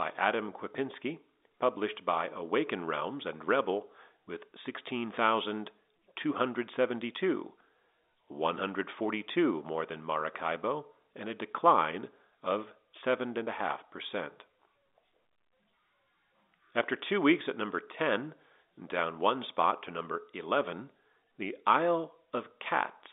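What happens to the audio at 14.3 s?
Nothing goes wrong at 14.3 s: the speech carries on intact through that moment, with only the narrow band of an ordinary G.711 telephone line.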